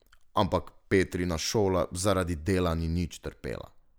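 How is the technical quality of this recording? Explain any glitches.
Listening closely, nothing in the recording stood out as a technical problem or glitch.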